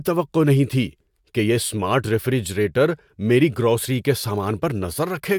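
No faults are audible anywhere in the speech; every section passes the listening check with nothing to flag.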